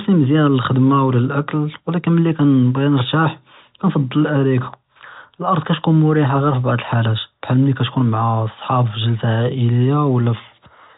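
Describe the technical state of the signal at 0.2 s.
At 0.2 s the speech is intact, carried through G.711 telephone coding with no fault and nothing above about 3.8 kHz.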